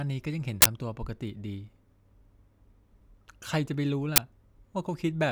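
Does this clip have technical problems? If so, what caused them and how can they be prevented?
Yes: two loud glitches, at 0.62–0.66 s and 4.16–4.18 s, come from an uninitialised buffer, where leftover memory played as sound before any audio was written. Clearing each buffer to silence before playback, and never queuing one until it has been filled, prevents this.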